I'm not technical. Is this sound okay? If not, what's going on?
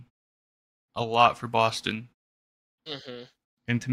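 Yes, nothing in this recording sounds wrong.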